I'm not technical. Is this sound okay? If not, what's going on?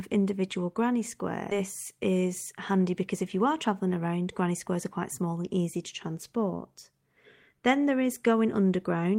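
No. There are two problems.

At about 1.51 s, right after "individual granny", there is a skip ahead. The system that collects incoming audio had a backlog, so it threw away a stretch, roughly a second of speech, and jumped straight to newer audio. Nothing fills the gap: the speech simply leaps forward, the two sides are stitched together, and whatever was said in that missing second is gone.

From 2.11 s to 3.15 s, just before "if you are travelling", there is a jitter buffer speed-up. The receiver was still holding more audio than it wanted, so it trimmed many tiny slivers, together well under a tenth of a second, to catch up. The speech plays about 5% faster but keeps its normal pitch, so it sounds slightly rushed rather than higher.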